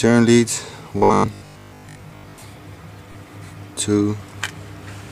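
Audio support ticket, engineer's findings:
Robotic sound from repeated short buffers, 0.98–2.42 s: rigid 50 Hz buzz, likely a late buffer replayed every 20 ms, covering most of the span. Fixed pitch distinguishes it from codec warble.

Lost LE Audio frames, 3.12–3.15 s: brief noisy smear, roughly 30 ms, fitting about four frames concealed by the LC3 decoder. Noisy, not pitched, unlike the buffer buzz.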